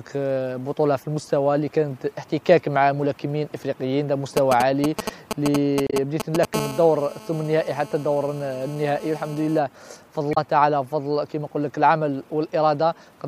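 From 4.37 to 6.45 s, a galloping dit-dit-dit of short buzzes cuts in at roughly the same level as the sound itself. These are GSM signalling bursts. A 2G phone nearby sends brief groups of radio bursts at a 216.7 Hz rate, as it does before a call or text arrives. The audio circuitry rectifies that radio energy, so each group comes through as a short 217 Hz buzz rather than as anything in the original audio.

Inside that stretch, from 5.87 to 5.93 s, there is a momentary disturbance: a chirp, squawk, click or brief gap. The same thing happens again from 10.31 to 10.38 s. Both come from damaged data in a compressed stream. Bytes at those points were lost, zeroed, overwritten or mixed with other data, so the decoder misread or rejected the frames, lost sync and had to hunt for the next valid frame header before playback could resume.

From 6.54 to 9.59 s the pattern gives way to a continuous hard, raspy buzz at 217 Hz. 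It is rich in harmonics and sits about 16 dB below the signal. This is GSM phone buzz. The phone is now in a call and transmits bursts 216.7 times a second without a break. The circuit rectifies that steady train of radio pulses into an audible tone that has no relation to the recorded sound.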